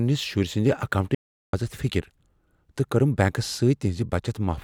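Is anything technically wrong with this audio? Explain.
Yes. From 1.15 to 1.53 s the speech cuts to silence for about 384 ms, with no room tone. This audio dropout to silence likely came from a lost input while recording continued writing silence.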